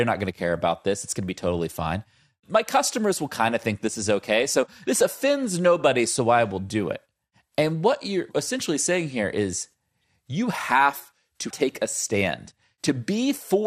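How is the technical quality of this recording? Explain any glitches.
The speech is plainly degraded by coding damage throughout, with two brief bursts of corruption on top.

MP2 compression is audible from start to finish. The sound is dull and gurgling. Upper sub-bands drop out and the rest are coarsely quantised, which fits MP2 at around 80 kbps. That low-rate coding is the likely cause.

DAB burbling occurs at 3.78 to 3.81 s, after "customers will kind of" and before "this is okay", and at 10.01 to 10.18 s, after "essentially saying here is" and before "you have to take". Bit errors, at a low rate, slipped past error correction into the audio data. Wrong samples put short blips of noise into single sub-bands. The bursts are brief, hitting five and six frames respectively.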